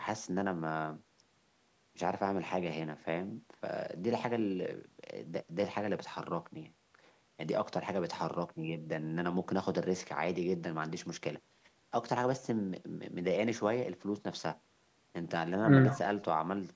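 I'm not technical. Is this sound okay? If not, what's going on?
Yes, nothing wrong can be heard in this recording.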